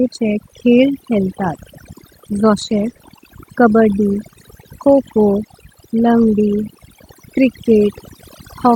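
Overdone noise removal runs through the whole speech clip. The suppressor is set so hard that bands near its noise estimate are pulled down or cut entirely. The background drops and breaks up into twinkling specks, and quieter parts of the voice go with it.

A lost packet rebuilt from error correction appears first at 1.53 to 1.55 s, a 20 ms stretch. Again, at 2.57 to 2.91 s, several rebuilt frames cluster together. The last comes at 6.17 to 6.23 s, about 40 ms. Each time the decoder plays the low-bitrate copy carried in the following packet, so nothing drops out, but those frames sound rougher and noisier than the surrounding audio.

Right after that cluster comes short concealed packet loss, at 2.93 to 2.97 s and again at 2.97 to 3.01 s. Each hole fits a single 20 ms packet that arrived too late. The receiver extends the preceding sound, then crossfades back into real audio, giving a brief smear or wobble.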